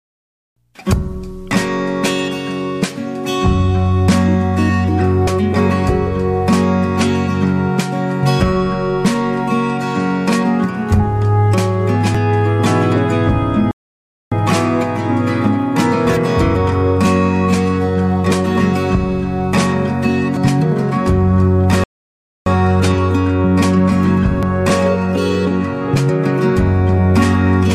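At 5.27 s, then 12.15, 20.37 and 24.43 s, compressed frames are skipped. The sound jumps ahead by roughly 100, 200, 400 and 200 ms, consistent with dropping whole frames of about 93 ms each. On a spectrogram this shows as an abrupt discontinuity with no gap. From 13.71 to 14.32 s and from 21.84 to 22.46 s, playback stalls for about 0.6 s each time, likely from the player running out of buffered data. The sound halts mid-flow, then resumes. The waveform shows a flat line, and the spectrogram a blank vertical band.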